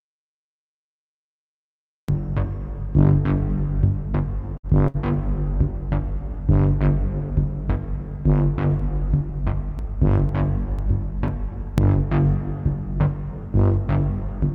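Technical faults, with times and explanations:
0.00–2.09 s, audio dropout to silence: the clip opens in dead silence with no room tone, already under way, until sound arrives abruptly at 2.09 s. The input was likely lost while the recorder kept writing silence, so anything during that span is gone.
4.57–4.66 s and 4.88–4.97 s, burst of packet loss: two short breaks about 60 ms long, each bridged by roughly 60 ms of the preceding sound held and faded out. The receiver extended the last audio it had over the missing stretch, then skipped ahead, so material is missing at both points.
8.80–11.78 s, periodic USB or driver dropouts: about seven ticks spaced every 0.498 s, each where roughly 2 ms of audio was skipped outright. The even spacing points to a background task blocking the bus or driver at a fixed interval.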